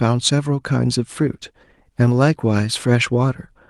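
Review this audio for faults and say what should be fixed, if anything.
A call bitrate drop starts at 1.21 s and runs to the end at 3.69 s, with the speech turning rougher and duller for the last 1.23 s. The coarser coding fits the encoder falling from around 64 kbps to about 19 kbps. To prevent it, keep the bandwidth estimate stable and set a higher minimum bitrate for the Opus encoder.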